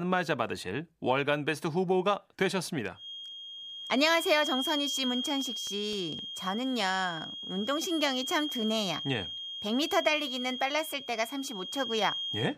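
A disc scratch defeats error correction once per revolution, producing six CD scratch ticks, tiny clicks of a millisecond or two, from 5.15 to 6.45 s.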